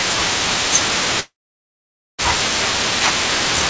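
Speech in which the sound breaks off at 1.20 s: the last bit of sound is stretched into a brief fading buzz, then near-silence takes over for most of the gap, which runs to 2.23 s. When the speech resumes, about 0.6 s of it is simply gone, and the timing afterward sits roughly 0.4 s later. This is likely a long network dropout, where packets stopped arriving, the receiver briefly concealed the loss, and then the jitter buffer re-adjusted its delay. The audio also has nothing above 8 kHz, consistent with a G.722 call path.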